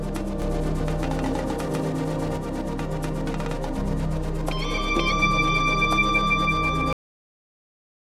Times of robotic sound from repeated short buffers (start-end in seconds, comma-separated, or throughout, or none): none